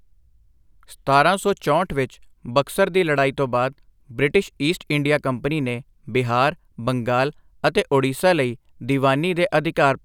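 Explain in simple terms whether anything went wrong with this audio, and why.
Nothing went wrong here, since the speech carries on without any glitch or problem worth pointing out.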